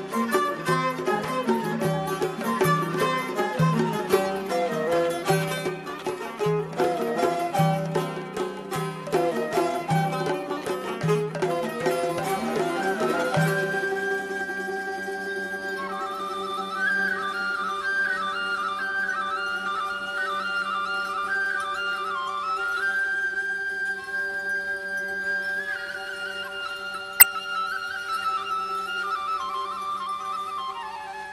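Right near the end, at about 27.20 to 27.23 s, there's a short burst of damaged data in the compressed stream. For roughly 30 ms the bytes feeding the decoder were wrong, so it couldn't parse those frames properly and had to hunt for the next valid frame header before it could lock back on. You hear it as a quick glitch cutting into the sound, then normal decoding picks up again.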